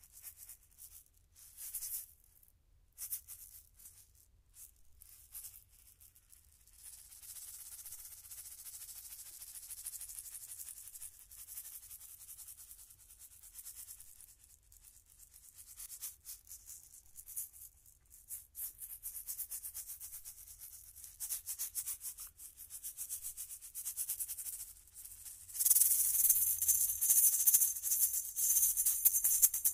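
At 3.81 to 3.85 s and again at 15.81 to 15.86 s there is a repeated buffer: fresh audio failed to reach the output in time, so the device replayed its last block of about 23 ms, which fits a 1024-sample buffer, twice more. The same fragment sounds three times with hard joins, giving a brief stutter. About 50 ms of the sound is skipped. Unlike a dropout, nothing falls silent; the stuck fragment repeats instead.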